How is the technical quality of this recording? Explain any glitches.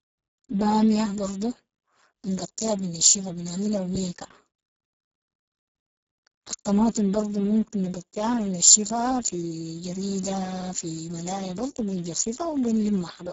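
Technical quality is poor, mainly down to codec damage running the whole way through this speech. It's Speex codec artefacting: the CELP coder has so few bits for the excitation that the voice comes out hoarse, noisy and edging into robotic, which fits a very low bitrate around 6 kbps. Nothing survives above about 7.6 kHz, and the upper band sounds like shaped noise fill rather than real detail.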